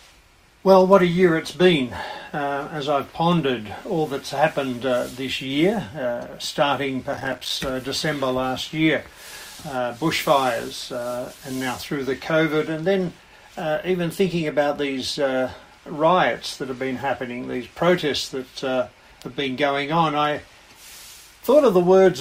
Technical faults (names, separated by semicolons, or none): processor overload crackle